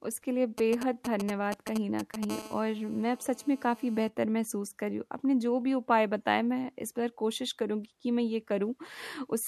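Speech, with two kinds of 2G phone interference. From 0.58 to 2.25 s, GSM signalling bursts break in as galloping ticks and short 217 Hz buzzes, nearly as loud as the speech. From 2.30 to 4.09 s, a steady GSM phone buzz follows, a raspy 217 Hz tone rich in harmonics, about 19 dB below the speech. A nearby phone in a call is transmitting, and the audio circuit rectifies its radio pulses.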